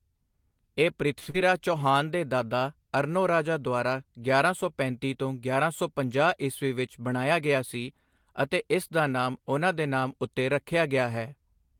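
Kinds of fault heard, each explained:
Short stall from a late packet: At 1.19 to 1.28 s a packet arrived after its playout time and the jitter buffer ran dry. The receiver extended the last sound for 69 ms until the packet turned up, then resumed at the same point. No audio is lost, but that sound is held unnaturally long with a slight buzz or dip, and the playout delay grows by 69 ms.
Short concealed packet loss: Immediately after, at 1.30 to 1.36 s, 60 ms of audio never reached the decoder in time. The receiver patched the gap with 36 ms of synthesised continuation, extending the preceding pitch or shaped noise, then cross-faded into the real signal. The result is a brief smear or wobble in the speech with some content dropped, and the delay shrinks by around 20 ms.
Jitter buffer speed-up: Between "ਸੌ ਪੰਜਾਹ ਈਸਵੀ ਵਿੱਚ" and "ਅਤੇ ਇਸ ਦਾ ਨਾਮ", from 7.00 to 7.85 s, the buffer was holding more audio than its target. 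To bring latency down, the receiver cut out short pitch-period segments repeatedly, removing about 70 ms in total. Speech runs at 108% speed with pitch unchanged, so this stretch sounds hurried.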